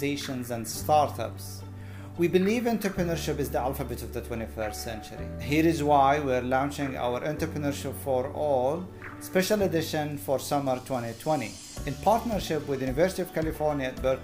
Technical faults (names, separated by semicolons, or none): none